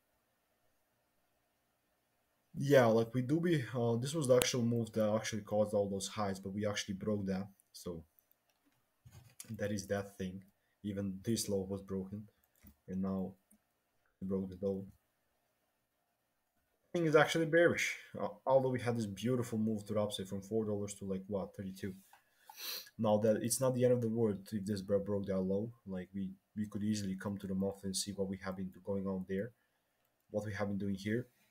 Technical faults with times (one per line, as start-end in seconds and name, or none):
4.42 file header played as audio